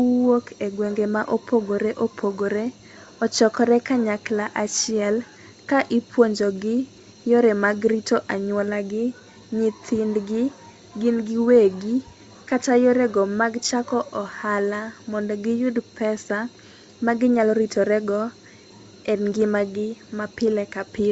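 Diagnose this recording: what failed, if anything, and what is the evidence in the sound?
Nothing failed; the speech shows no audible fault.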